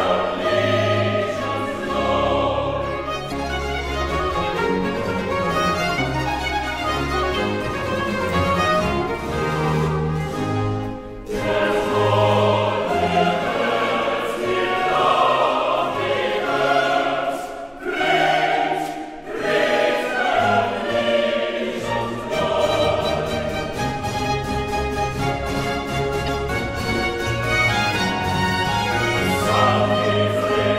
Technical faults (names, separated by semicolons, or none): damaged data in a compressed stream